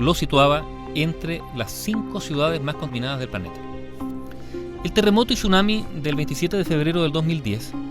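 At 2.89 s the audio jumps forward. Compressed frames were skipped, from 2.89 to 2.94 s. A short run of frames never reached the output, either missing from the file or rejected by the decoder as damaged. The sound lurches ahead by roughly 70 ms, which fits a loss of about four frames of 20 ms each.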